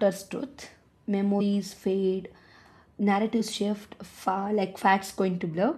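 A short smeared blip at 1.40 s jumps the speech forward by around 70 ms, and another at 3.39 s skips ahead by roughly 20 ms. Both are compressed frames skipped. Whole frames of the encoded stream, each 23.2 ms long, were never played, about three at the first point and one at the second. Because adjacent frames overlap, each join is a soft blur, not a sharp click.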